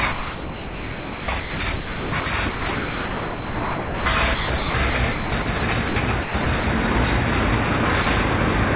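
From 0.12 to 4.06 s the sound keeps breaking up: real audio flickers in and out of a smooth, synthetic hiss, and about 3.26 s of that stretch is hiss rather than the actual sound. The same choppiness returns from 4.34 to 5.62 s, with about 0.64 s filled, and from 6.22 to 6.64 s, with about 0.2 s filled. This is sound chopped by the voice detector. The sender's detector likely kept switching between transmitting and holding back, and the receiver filled each gap with comfort noise of the kind described in RFC 3389.

Two shorter breaks are different. From 5.88 to 5.96 s, 80 ms of sound vanishes into steady noise, and from 8.02 to 8.06 s another 40 ms goes the same way. Each time the sound returns at once. These are sound dropped by the voice detector: it likely mistook a quiet moment for background, stopped sending, and comfort noise took its place until it triggered again.

Throughout the clip nothing is heard above 4 kHz. 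That fits a G.711 A-law call path at 64 kbps.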